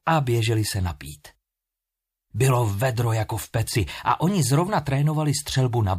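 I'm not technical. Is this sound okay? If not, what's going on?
Yes, nothing wrong with it.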